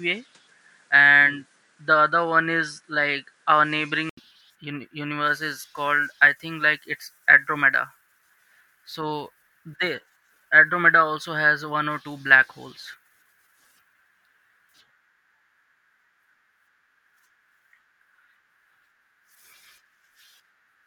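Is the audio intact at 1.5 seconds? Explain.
No, at 1.5 seconds the speech sits inside a stretch from 0 to 4.17 s that sounds like an input switched to a poorer device. It's likely a weaker mic, so nothing comes through above 10.5 kHz and it sounds duller, with faint added background noise. Level stays about the same, and there's an 80 ms gap at the switch.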